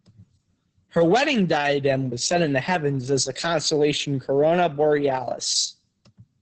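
Speech clip with heavy Opus voice compression throughout: nothing above 8.7 kHz, plus a muffled, hoarse, slightly robotic SILK texture that fits roughly 10 kbps.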